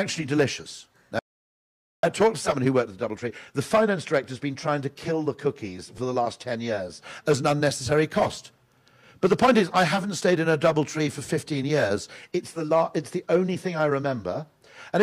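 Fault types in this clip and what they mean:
Audio dropout to silence: the input signal was likely lost for a moment while recording carried on writing silence, so from 1.19 s to 2.03 s the sound cuts off mid-flow into 0.84 s of silence with no room tone, then resumes abruptly.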